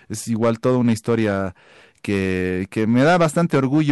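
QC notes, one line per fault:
throughout: hard clipping, speech driven about 8 dB past the ceiling, so roughly 3% of samples flatten, adding high harmonics heard as harsh crackle on loud syllables.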